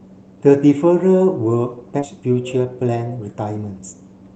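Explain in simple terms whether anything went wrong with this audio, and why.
Two things went wrong in this speech, both from a call connection.

The first is a skip ahead, at about 1.99 to 2.01 s. A stretch of speech, roughly seven tenths of a second, never got played. The system jumped straight to later audio that was already waiting. There is no silence to mark the spot. The speech on either side is simply joined together, so part of what was said just vanishes.

The second is a jitter buffer speed-up, from about 2.09 to 4.02 s. The receiver had more audio stored than it wanted, which adds delay. To catch up, it cut out many tiny slices of sound in a row, about a third of a second in total. The speech plays at about 114% speed but keeps its normal pitch. It sounds a little rushed.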